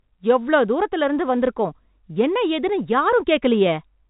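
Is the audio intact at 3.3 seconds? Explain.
Yes, the audio is intact at 3.3 seconds, with only the ordinary band limit of G.711 telephone coding, which lets nothing above 4 kHz through.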